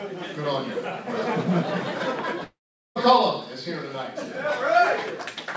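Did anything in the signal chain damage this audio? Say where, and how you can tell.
Yes. From 2.44 to 2.97 s the sound smears into a fading buzz, then about 0.4 s of silence, and resumes with roughly half a second gone, likely a long network dropout.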